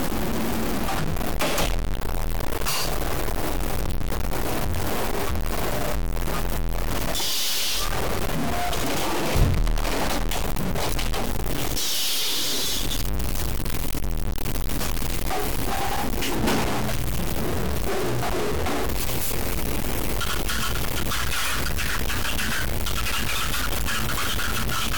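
From start to finish there's a harsh, buzzy grit riding on the sounds, and even the quiet gaps are filled with noise. That's most likely a stuck bit, with one data bit frozen so about half the samples jump by a fairly big step, something like -20 dBFS.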